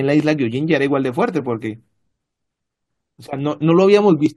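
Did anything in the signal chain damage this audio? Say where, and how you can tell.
No, nothing in the signal chain has audibly damaged this speech recording. No stage from capture through to playback leaves a trace that can be heard in it.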